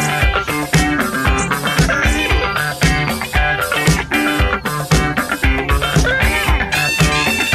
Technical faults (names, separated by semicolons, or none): none